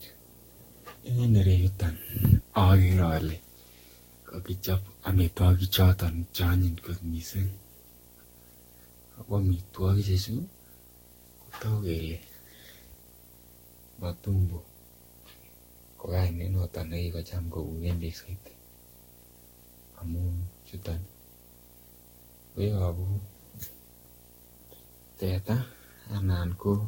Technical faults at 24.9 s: video or display buzz; generation loss

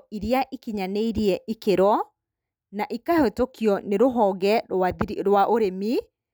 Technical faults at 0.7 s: none

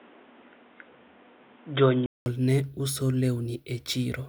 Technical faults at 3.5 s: none

